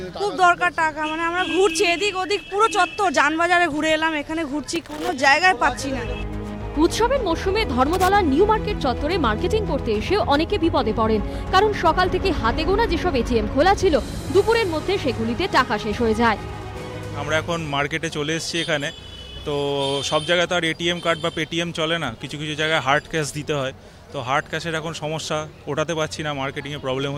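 At 4.76 to 5.13 s, and again at 7.93 to 8.08 s, there is loose connector crackle. A worn or dirty contact is making and breaking as it shifts. The signal gets chopped. Each burst sounds like irregular, scratchy crackling.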